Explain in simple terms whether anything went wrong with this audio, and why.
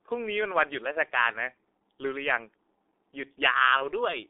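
The recording passed through the G.723.1 codec, an old internet-phone codec that squeezes speech hard and keeps only a narrow telephone band. The whole clip sounds muffled and hoarse, with consonants smeared and nothing bright above about 3.7 kHz.

VoIP packet loss concealed by the speech codec happens twice: one 30 ms packet vanished at 0.92 s and another at 3.77 s. The decoder guessed the gaps from the preceding sound, leaving a brief buzzy or noisy, fading smear until about 1.01 s and 3.88 s.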